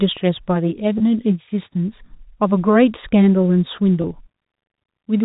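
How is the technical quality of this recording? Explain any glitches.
The recording has two brief dropouts, at 0.98 s and 4.02 s, heard against a telephone-band sound with nothing above 4 kHz. Both are packet loss with pitch repetition. Each time, roughly 20 ms of audio went missing, consistent with a single lost packet. The receiver filled the gap by repeating the last pitch period it had, so each dropout comes across as a momentary held, slightly buzzy tone rather than a click or silence.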